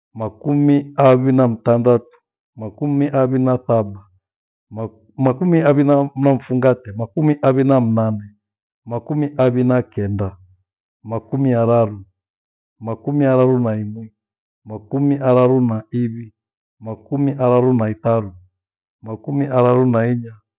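Nothing in the speech here trips a technical alarm; there's no glitch, dropout or other fault to point to anywhere along the way.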